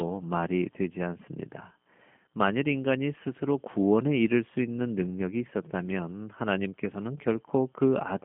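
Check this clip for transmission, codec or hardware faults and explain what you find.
One codec fault runs through the whole speech clip. Throughout, G.729 coding rebuilds the speech from a filter model, pitch prediction and sparse pulses, consistent with 8 kbit/s. The damage is plainly audible: it sounds slightly rough and synthetic, confined to 150 Hz–3.4 kHz.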